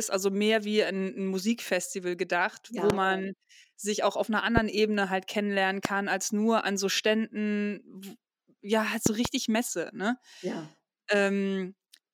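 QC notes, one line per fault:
2.90–2.92, 4.57–4.60, 5.85–5.87 and 9.06–9.28 s, loud pops: sharp pops about 20 dB above the speech, a double one in the last, with speech carrying on underneath. Likely a voltage jolt from a plug, switch, static or driver glitch.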